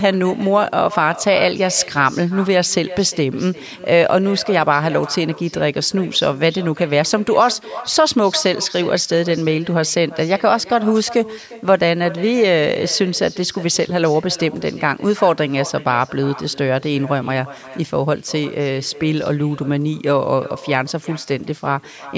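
Right through the speech there's echo with no canceller: the far end's loudspeaker feeds back into its microphone, so every phrase returns roughly 400 ms later as a thin copy about 18 dB down, sitting under the band-limited call audio that stops at 8 kHz.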